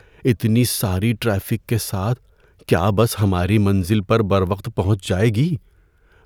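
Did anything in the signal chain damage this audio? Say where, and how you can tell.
No, nothing along the chain seems to have touched this speech recording; I can't hear any damage anywhere in it.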